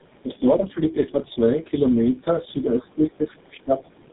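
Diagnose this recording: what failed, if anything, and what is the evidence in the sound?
The speech sounds rough, muffled and warbly from start to finish, with nothing audible above 3.8 kHz. This is tandem speech coding, a codec-stage fault. The texture fits the call crossing three low-rate speech codecs in a row, the last resembling GSM full rate, with transcoding at each border. Each coder re-encodes the previous one's already degraded output, so the quantisation noise and spectral smearing compound.

From 4.06 s to the very end, the talker's level drops by about 15 dB for roughly 70 ms. This is consistent with speech suppressed in double talk at the call-processing stage. The likely cause is the far side talking at the same moment: the echo canceller could not tell its own talker from the loudspeaker echo and attenuated both.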